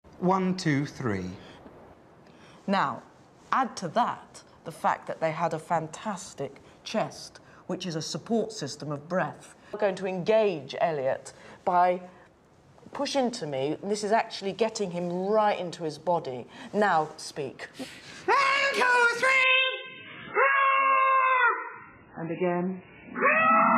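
At 19.44 s the audio switches abruptly, with no gap, to a lower-bitrate version of the adaptive stream, lasting to the end at 23.77 s. Nothing remains above 3.7 kHz and codec artefacts rise, which fits a step from 128 to 8 kbit/s MP3.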